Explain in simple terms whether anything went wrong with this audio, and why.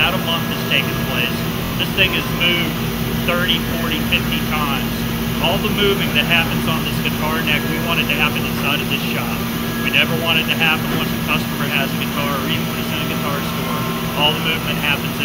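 New audio arrived late, so the player repeated its last 23 ms chunk, a repeated buffer. You hear short stutters at 1.65–1.72 s (three repeats) and 3.69–3.72 s (one).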